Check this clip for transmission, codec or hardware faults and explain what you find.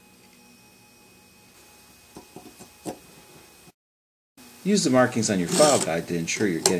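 No transmission, codec or hardware faults turn up in this clip.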